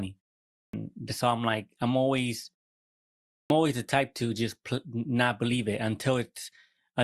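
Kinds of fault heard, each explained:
Clipped start after a pause: the output device sleeps through silence and needs time to wake, so speech resuming after a pause loses its opening. After 0.41 s of quiet, about 190 ms vanishes before "so I'm like I'm" at 0.54 s; after 0.85 s, about 180 ms goes before "always the type to" at 3.32 s.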